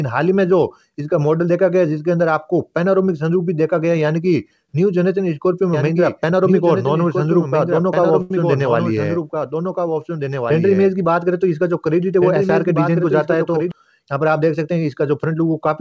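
From 5.73 s to 13.71 s a doubled audio track appears. A dry copy about 5 dB quieter trails roughly one and a half seconds behind, starting and stopping abruptly, likely from a second capture path.

At 8.22 s a short stall from a late packet holds the sound for 82 ms until 8.31 s, with a slight buzz or dip. Nothing is lost, but the delay grows by 82 ms.

From 15.01 s to 15.68 s a jitter buffer speed-up plays the audio at 108% speed, trimming about 70 ms of pitch-period slices. The sound turns hurried at unchanged pitch. Throughout, the band stops at 8 kHz, which fits the G.722 call codec at 64 kbps.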